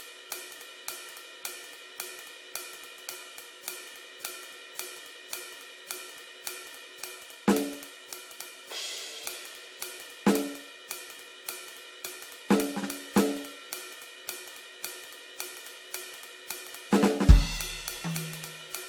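Music, with generation loss throughout the clip. It sounds swirly, smeared and hollow, and attacks blur. Nothing sits above 19.4 kHz. The likely cause is around five passes through a lossy codec, which fits AAC-LC near 96 kbit/s, each pass adding fresh quantisation noise.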